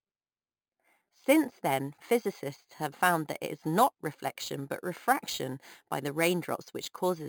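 Imaging from sample-and-hold upsampling runs through the whole speech clip. The audio sounds as if it was stored at a low rate near 11 kHz and raised to a much higher one by simply repeating each sample. No smoothing filter was applied. Mirror copies of the speech spectrum appear above the original band. The first copy spans about 5.5 kHz to 11 kHz, roughly 16 dB below the signal. It is heard as a bright, metallic fizz that rises and falls with the speech.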